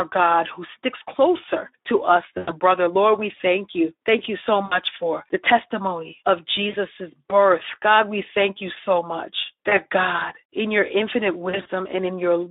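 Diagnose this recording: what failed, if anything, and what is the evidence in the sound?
The codec stage is at fault: the whole 12-second speech clip is coded with Speex at 11 kbps over a narrow line of 300 Hz to 3.7 kHz. At that rate the CELP excitation gets too few bits, so the voice sounds plainly hoarse and grainy, with a noisy edge. On a spectrogram, energy stops sharply near 3.7 kHz and below 300 Hz, and the harmonics look smeared and noise-filled, not cleanly striated.

The network stage adds VoIP packet loss concealed by the speech codec at five points: 2.37–2.54 s (right after "sticks closer to us"), 4.65–4.79 s, 6.69–6.75 s, 9.69–9.78 s (after "thank you so much") and 11.49–11.68 s (after "in your infinite"). The decoder repeats its last pitch and filter with falling gain, stretching the sound into a brief buzzy tone or coloured noise that fades. The missing stretches run about 100, 60, 40, 20 and 120 ms, which fits 20 ms frames. 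The last gap is scattered over 160 ms in short runs of up to 40 ms. Because each frame builds on the one before, the voice stays weak or distorted for a moment after packets resume. On a spectrogram these gaps show as flat, repeated harmonic bands. On the waveform they appear as a periodic stretch with a decaying envelope.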